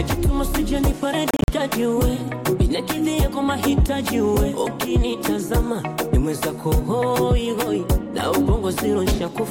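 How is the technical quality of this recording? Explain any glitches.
The recording has one glitch, a Bluetooth dropout between 1.31 and 1.48 s. Across that 174 ms span the sound cuts out repeatedly, with about 116 ms missing in total and the longest single gap lasting 43.5 ms. Each hole has an abrupt edge or a brief fade of a few milliseconds, and the sound resumes as though it had kept playing. The likely cause is wireless packets arriving too late at the headphones and being discarded. The broken-up pattern suggests a short burst of several lost packets rather than one long loss.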